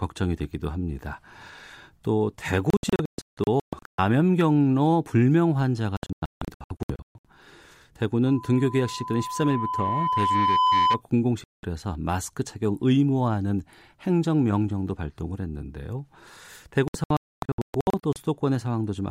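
At 2.70 to 3.99 s and again at 5.97 to 7.25 s the speech breaks up in digital broadcast dropouts. The receiver keeps muting on bad frames, so you get short holes, the longest 160 ms, that add up to roughly 0.8 s lost in each stretch. Then from 8.26 to 11.02 s there's loudspeaker feedback squeal: a 1 kHz tone swells over about two seconds until it sits about 5 dB above the speech, because the mic's loop through the speaker has gained past unity at that frequency. Two more dropouts follow, a clean 0.19 s gap at 11.44 s and another scattered run from 16.88 to 18.16 s with holes up to 256 ms.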